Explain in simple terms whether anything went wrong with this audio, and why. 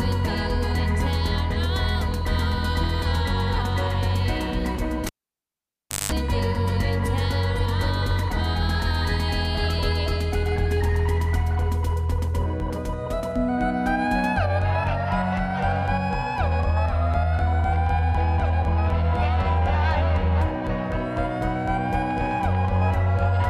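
Cable pulled and plugged in, 5.06 to 6.12 s: a live cable popped out, fell almost silent for a second, buzzed with 50 Hz mains hum, then popped back.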